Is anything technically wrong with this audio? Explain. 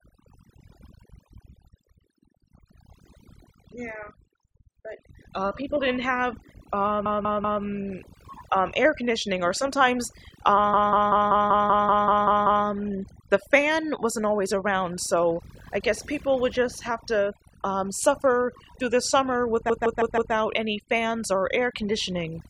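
Yes. Throughout the speech, overdone noise removal leaves the background near-silent with twinkling specks. Individual frequency bands close to the estimated noise floor are pulled down hard, taking quiet speech detail with them. A low-bitrate codec would smear the whole signal, but here the damage follows the noise estimate.

Repeated frames cause stutters at 7.06 to 7.63 s, where a 192 ms block plays three extra times, and at 10.74 to 12.66 s, where a 192 ms block repeats ten extra times. A third stutter falls between "suffer through the summer" and "any fans", at 19.70 to 20.34 s, with a 160 ms block heard four extra times. The same stretch of audio plays again, and it adds time without dropping anything. That is how it differs from a dropout.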